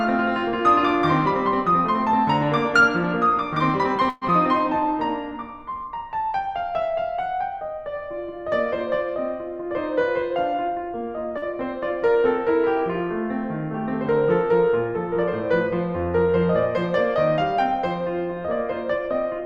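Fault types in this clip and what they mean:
Long network dropout: At 4.09 to 4.31 s the music is carried on by a fading buzz for about 188 ms, then resumes with roughly 60 ms gone. The likely cause is a gap in arriving packets. The playout delay also shifts by around 70 ms.
Jitter buffer slow-down: From 5.48 to 5.82 s the music plays at about 91% speed with unchanged pitch. The receiver repeated single pitch periods to rebuild its reserve, adding 38 ms, so sounds are drawn out.
Jitter buffer speed-up: Between 9.61 and 10.89 s the music runs at about 107% speed at the same pitch. Short pitch-period pieces totalling roughly a tenth of a second were cut to lower excess buffer delay, so the tempo briefly hurries.
Short stall from a late packet: At 11.38 to 11.45 s a packet arrived late and the buffer ran dry. The last sound was stretched by 44 ms, then playback carried on from the same point, so nothing is lost but the delay grows by 44 ms.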